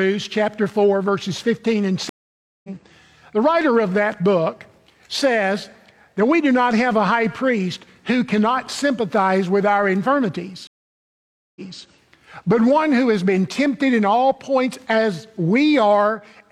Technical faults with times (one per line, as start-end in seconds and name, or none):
2.09-2.69 stream reconnect
10.67-11.84 stream reconnect